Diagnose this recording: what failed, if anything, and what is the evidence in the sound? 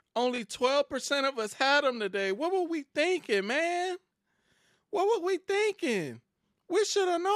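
A repeated buffer at 0.36 to 0.38 s points to a failure at the driver or buffer stage. A very short slice of the speech plays twice, with a hard join where the copy starts, so it is heard as a brief click or buzz rather than an obvious stutter. The repeat length fits a 20 ms buffer. Fresh audio was not delivered in time, so the device replayed its last buffer once, and about 20 ms of the original speech was lost.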